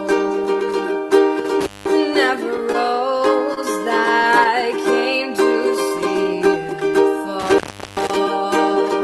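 At 1.40 s the sound abruptly drops by about 6 dB for 50 ms, then returns to full level at 1.45 s. This is most likely one channel dropping out: once left and right are summed to mono, whatever both channels shared loses half its level, and anything only in the lost channel vanishes. On a waveform it appears as a short, flat-topped dip in the envelope. A spectrogram shows a uniform darkening across all frequencies with sharp vertical edges.

From 1.61 to 1.91 s comes the first intermittent contact: a loose connection opens for about 190 ms. The signal cuts out with crackle at both edges, and only faint hiss remains in between. On a waveform this is a near-flat stretch bracketed by spiky bursts. On a spectrogram it is a pale gap framed by bright broadband vertical streaks.

Between 2.57 and 3.59 s come scattered short gaps, roughly five of them, each under about 30 ms and totalling around 70 ms. 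The receiver covered each hole by extending the preceding sound, so they register as brief ticks and small smears rather than silences. A spectrogram shows short horizontally stretched patches where harmonics freeze briefly. The waveform shows slight repeated-cycle segments.

A second, longer intermittent contact runs from 7.40 to 8.16 s, with the line open for about 385 ms. The same crackling edges and hiss-filled dropout appear, here as a wider blank region on both displays. Throughout the clip the spectrum tops out near 12 kHz, consistent with the call codec path.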